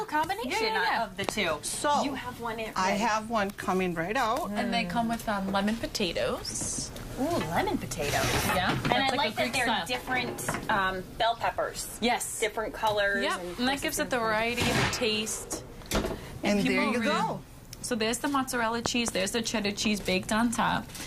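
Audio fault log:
1.29–1.31 s, 8.92–9.11 s, 18.86–19.10 s: loud pop. There is a single sharp pop first, then a quick double pop in each later span, each peaking about 20 dB above the sound, which carries on underneath. The likely cause is a sudden voltage pulse from a plug, switch or static.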